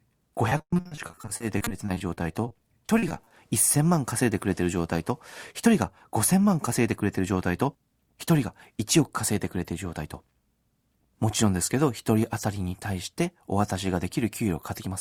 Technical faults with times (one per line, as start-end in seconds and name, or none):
0.49-2.52 repeated packet loss (robotic sound)
2.98-3.32 repeated packet loss (robotic sound)
6.84-7.20 jitter buffer speed-up